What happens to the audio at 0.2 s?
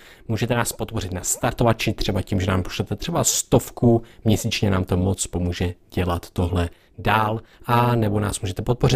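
At 0.2 s the speech carries overlap-add ripple, present across the whole clip rather than just this moment. Frames were recombined with an overlap that fails to sum to constant gain, so level swings by about 11 dB at around 300 Hz, giving a metallic buzz with extra tones around each note.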